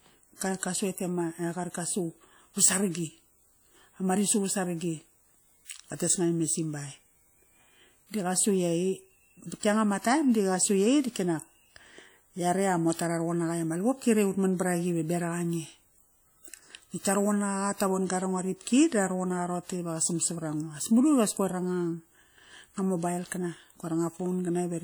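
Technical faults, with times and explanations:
Throughout, WMA compression: the speech carries a plainly audible ringing, washy edge and a hiss that swells and fades with the level. That's likely a transform codec spreading its quantisation noise over long blocks, and the amount of damage fits a bitrate around 48 kbps.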